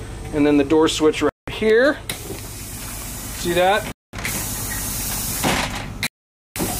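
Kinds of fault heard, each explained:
Bluetooth stall: Radio interference on the wireless link likely delayed audio packets long enough for the headphones' small playback buffer to empty, so output halts until retransmitted data arrives. Here the sound drops abruptly to silence three times, at 1.29–1.48 s, 3.92–4.13 s and 6.07–6.56 s, for roughly 0.18, 0.21 and 0.49 s. After each gap it resumes suddenly, with the last dropout clearly the longest.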